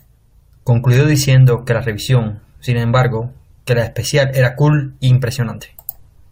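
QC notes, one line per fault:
No faults were found on listening through this speech recording.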